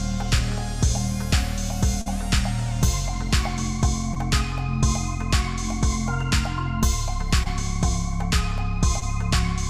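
Brief smears at 2.01–2.08, 4.14–4.18, 7.44–7.48 and 9.00–9.03 s are short concealed packet loss. Gaps of 40 ms, then 20 ms each, were filled by extending the preceding sound.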